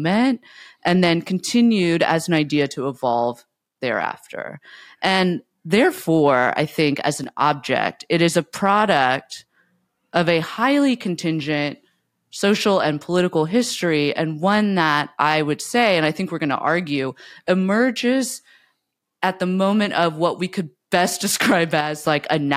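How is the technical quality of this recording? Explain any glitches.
The recording has two brief level dips. Right after "I think as", from 7.24 to 7.41 s, and again from 21.81 to 22.07 s, the speech suddenly drops by about 6 dB and then returns, an abrupt step down lasting a fraction of a second. This is likely one channel dropping out. With one stereo side gone, the mono sum keeps only half of the shared signal, and anything present only on that side vanishes.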